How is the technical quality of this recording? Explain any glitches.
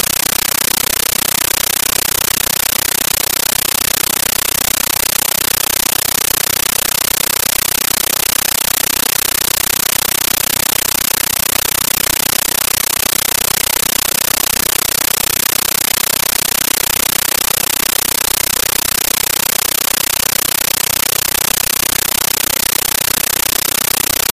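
The technical quality is very poor. A compressed stream played as audio replaces all the sound with loud, harsh static for the whole recording.

From start to finish, the output is a Dolby Digital (AC-3) data stream that was passed to the link as if it were ordinary samples and never decoded. Each encoded frame comes out as a 13.3 ms burst of noise followed by silent zero padding. These bursts repeat 31.25 times a second, and that burst length fits a 640 kbps stream. What you hear is an extremely loud, buzzy chatter with no trace of the intended sound. A bad cable or interference would give random crackle. This static instead pulses at a steady, clock-like rate, and that rate gives away its digital-bitstream origin.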